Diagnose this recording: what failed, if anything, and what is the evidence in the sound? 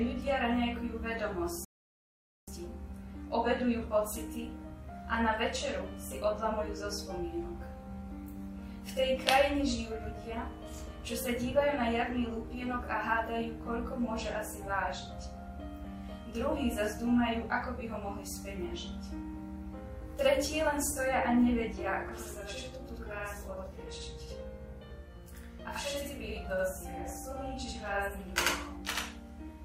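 A rebuffering stall in playback: the sound cuts to silence at 1.65 s and resumes at 2.48 s exactly where it stopped, adding 0.83 s without losing any audio, unlike a dropout.

A channel delay (doubling) at the driver or buffer stage: from 22.09 s to the end, a same-level copy arrives 85 ms late, which fits a 4096-sample buffer. It is a single slap, not a decaying reverb tail.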